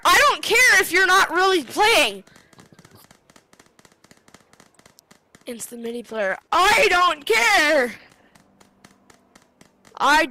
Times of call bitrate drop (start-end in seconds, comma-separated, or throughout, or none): 6.13-10.31